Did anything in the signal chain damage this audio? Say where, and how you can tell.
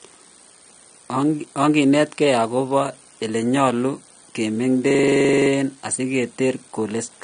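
Yes. At the codec stage, the audio was likely coded with AAC compression at a low bitrate, and the damage is plainly audible throughout. Nothing survives above about 9.7 kHz, so the top octave of the speech is gone and it sounds dull. The encoder had too few bits for its hearing model, so the remaining bands are quantised coarsely, which smears detail and leaves a warbly, fizzy texture on sibilants. That fits AAC-LC at around 32 kbps.

The second fault sits at the driver or buffer stage: a system hang loop from 4.91 to 5.50 s. The host stopped supplying new samples, but the sound hardware kept replaying its ring buffer. A single 42.67 ms slice repeats exactly 14 times, which is heard as a machine-gun stutter at about 23.4 Hz. That loop length fits a 2048-sample buffer. When playback resumes, essentially nothing seems to be missing, so the loop was inserted rather than covering lost audio.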